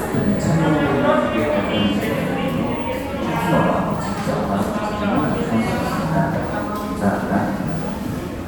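Nothing stood out as a technical problem on listening to these everyday sounds.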